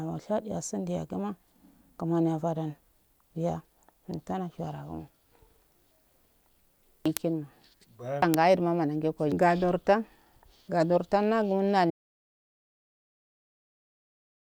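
A speech recording that cuts off abruptly at 11.9 s and stays in silence through to the end, with no room tone at all beneath the gap. This is an audio dropout to silence, likely from the input being lost while the recorder kept writing silence, so whatever followed is gone.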